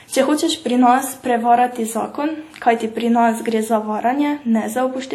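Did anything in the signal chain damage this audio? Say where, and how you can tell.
Yes. The damage likely happened at the codec stage, where WMA compression at a low rate, consistent with about 48 kbps, was applied across the whole speech clip. Its long transform blocks smear quantisation noise into a ringing, washy hiss that breathes with the signal, and nothing remains above 16.5 kHz.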